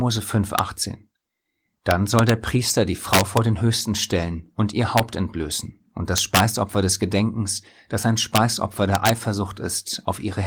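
Violent cracks break through the speech at 0.59 s, from 1.91 to 2.29 s, from 3.13 to 3.37 s, at 4.98 s between "stellen und ihr" and "entblößen und das", from 6.18 to 6.40 s after "entblößen und das", at 8.36 s after "das ein", and from 8.95 to 9.09 s. This is integer overflow. Peaks pushed about 1 to 5 dB past the integer limit wrapped to the opposite sign instead of being held there, so each one flips across the full range. The result is far harsher than clipping. The Opus voice coding does only light damage.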